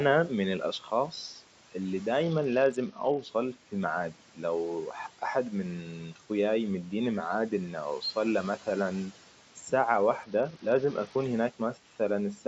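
A speech recording, heard through call microphone processing that leaves nothing above 8 kHz. Between 0.80 and 0.92 s the noise suppressor mistook part of the speech for background and pulled it down by about 9 dB for roughly a tenth of a second, so that stretch sounds swallowed and faint. From 2.23 to 3.22 s, and again from 10.23 to 11.24 s, just after "أوصل له مثلاً ساعة", a Bluetooth SBC bit pool drop occurs: the link appears to fall from a bit pool of around 28 to about 8, near 72 kbps, starving the upper sub-bands and coarsening the rest, so the treble dulls and a gritty grain rises until quality returns.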